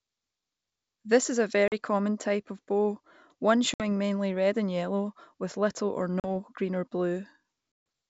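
Packet loss on an ADPCM call hits this speech clip at 1.68–1.74 s (after "is a"), 3.74–3.83 s (before "mainly red and yellow"), 6.20–6.28 s (before "green or") and 7.72–7.86 s. Each gap is a hard-edged silence of about 40, 60, 40 and 140 ms, consistent with a handful of lost packets. The decoder's adaptive predictor and step size then restart out of step with the sender, so speech resumes slightly distorted before settling. The wideband G.722 coding itself is clear.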